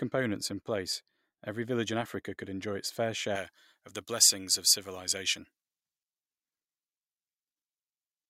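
From 3.35 s to the end, pre-emphasis was left on: the treble boost, shaped like a J.17 curve, was never undone, leaving 10 kHz about 11 dB hot, so the speech turns thin, bright and sibilant.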